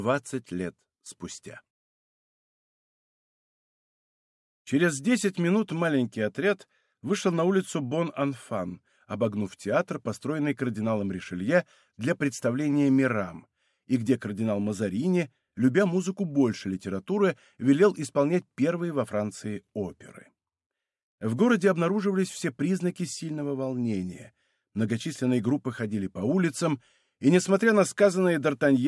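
No faults can be heard anywhere in the recording.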